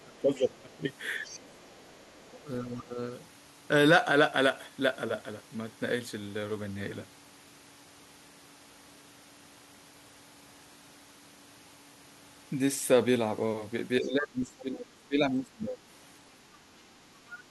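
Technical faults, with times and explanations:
0.04 to 0.84 s, 1.26 to 1.33 s, 2.44 to 2.98 s, 14.01 to 15.82 s: speech suppressed in double talk. The talker's speech dips while the other side is playing on the loudspeaker, by up to about 20 dB. The likely cause is an echo canceller that cannot split the two and turns both down.
1.25 to 2.42 s, 14.59 to 14.78 s, 17.29 to 17.41 s: other side's voice leaking through. A second, faint voice sits under the talker, at about 20 to 25 dB below the speech. It is likely loudspeaker echo that the echo canceller failed to remove from the microphone.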